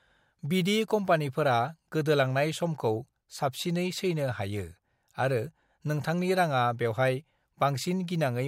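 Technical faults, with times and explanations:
1.47 s to 8.48 s, crude rate conversion: the speech gains a faint gritty fizz that tracks louder and brighter syllables, sitting roughly 40 dB below the signal. Linear interpolation without filtering leaves inharmonic aliased tones, consistent with a 48 kHz to 44.1 kHz change.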